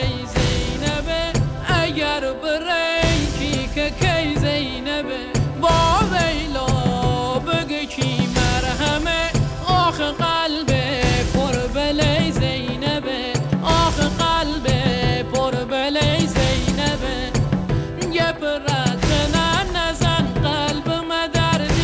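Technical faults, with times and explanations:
No faults found; the audio passed over a call path with nothing above about 8 kHz, consistent with a wideband codec such as G.722.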